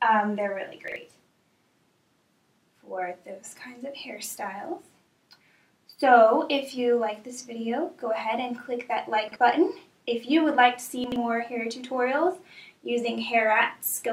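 Three brief scrambled spots, at 0.88, 9.28 and 11.04 s, are chunks out of order. A 40 ms block of sound lands late, one chunk behind at the first two and two behind at 11.04 s. Nothing's missing, but the order is wrong at the hard joins.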